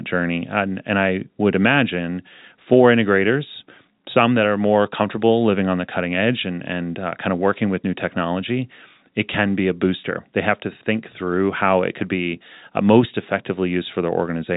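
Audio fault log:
Speech heard without any fault.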